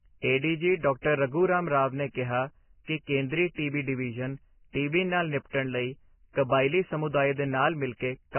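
Speech throughout sounds dull, hissy and grainy, with nothing above 3 kHz and roughened, smeared consonants. The likely cause is heavy Vorbis compression at a very low bitrate near 10 kbps, which lowers the cut-off and turns coarsely quantised detail into noise.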